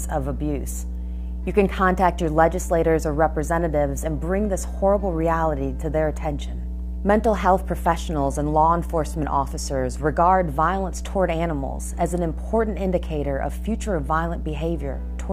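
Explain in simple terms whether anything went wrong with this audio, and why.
Mains hum runs through the whole clip, from the first second to the last. It is a steady low buzz at 60 Hz, the rhythm of the household power supply, and here it is loud, nearly as strong as the sound itself. It happens when electricity from the power line leaks into the audio, usually through a ground loop between connected equipment or a transformer sitting too close to the cables, so the wall current gets recorded along with everything else.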